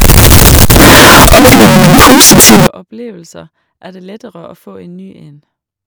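From the start to 2.67 s, the speech is buried under very loud, harsh distortion. This is the sound of signed and unsigned samples mixed up. The likely cause is 16-bit samples read with the wrong sign convention, which flips the top bit. Every zero crossing then becomes a leap across the full range. Quiet moments blast as loudly as the rest. The fault ends abruptly at 2.67 s.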